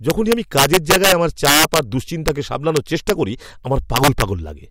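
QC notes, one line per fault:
0.10–1.79 s, integer overflow: the speech is pushed about 6 dB past full scale, and each peak wraps to the opposite sign instead of being limited, giving violent cracks rather than clipping's flattened buzz.
2.28 s, integer overflow: one brief crack from a peak about 1 dB over, flipping across the full range.
2.77–3.10 s, integer overflow: about 1 dB over, so only the highest peaks wrap, heard as sharp cracks.
3.96–4.22 s, integer overflow: about 4 dB over, with cracks on the peaks.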